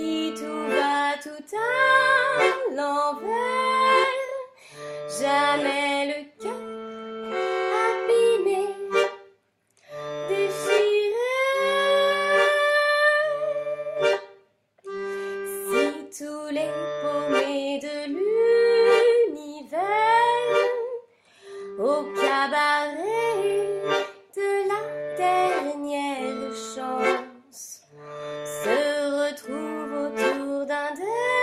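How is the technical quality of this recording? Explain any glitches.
Nothing stood out on listening; I heard no glitches or technical problems anywhere in the recording.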